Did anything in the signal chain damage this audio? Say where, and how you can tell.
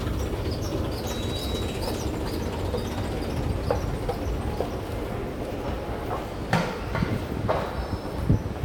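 No, no damage is audible.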